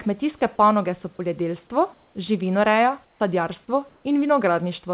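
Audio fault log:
1.16 s and 3.65 s, each about 30 ms: sound dropped by the voice detector. Right after "kmetijske panoge so" and again at 3.65 s, about 20 ms of sound gives way to flat noise. The likely cause is the detector mistaking the sound for background. On a spectrogram, the harmonics stop abruptly and uniform grey fills the gap.
1.94–2.15 s, 3.05–3.20 s, 3.89–4.04 s: comfort noise in place of the background. After "kmetijske panoge so poljedelstvo", the detailed room noise, about 40 dB below the speech, turns into smooth, featureless hiss. The likely cause is the sender pausing transmission and the receiver synthesising filler noise. On a spectrogram the texture is even, and on the waveform the level drops about 4 dB at 3.05 s.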